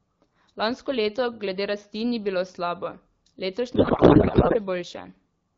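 At 3.75 s the speech suddenly turns into garbled noise and warble that barely tracks what's being said, lasting until about 4.57 s. That's a codec payload misread: the AMR wideband frames look like octet-aligned packing read as bandwidth-efficient, so the decoder pulls every field from the wrong bits.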